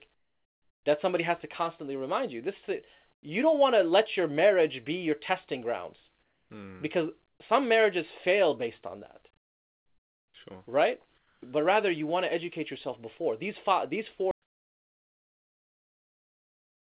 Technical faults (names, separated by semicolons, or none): comfort noise in place of the background; audio dropout to silence